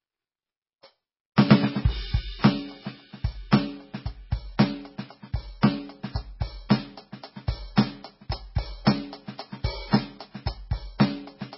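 Music, squeezed throughout by what is likely heavy MP3 compression at a starved bitrate, consistent with about 16 kbps. The encoder has cut everything above 5.6 kHz, leaving it dull, and weak frequency lines flicker between frames, giving a watery, swirling texture with smeared attacks.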